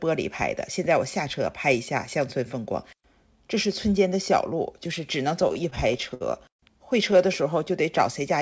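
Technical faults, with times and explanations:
5.42 to 6.61 s, repeated stalls (stutter): packets arrived late, so the jitter buffer kept running dry and the receiver stretched the last sound to bridge each wait, the longest about 107 ms. About a quarter of the span is held sound, so the audio drags and stutters, with nothing lost. The wideband call path stops at about 8 kHz.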